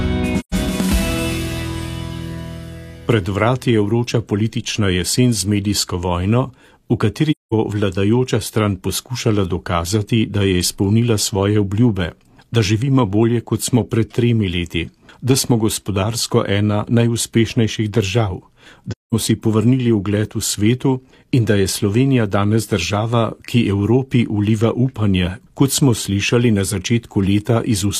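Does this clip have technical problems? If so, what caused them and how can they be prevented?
Yes. AAC frame loss with muting: lost frames were zeroed, so the sound fades into soft-edged silent gaps at 0.40–0.54, 7.31–7.53 and 18.91–19.14 s. Protect the stream with forward error correction or retransmission, and use decoder concealment that fills lost frames instead of muting them.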